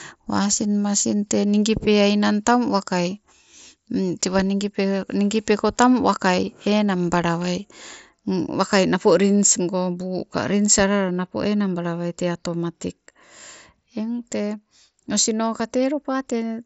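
At 11.42 s, between "ka rins alala napo" and "enangbala wai tee atomatik", and at 15.59 s, concealed Bluetooth headset packet loss patches a 7.5 ms gap, fitting one lost packet, with copied waveform. Each is nearly inaudible, showing as a repeated cycle in the waveform and a faint vertical seam on the spectrogram.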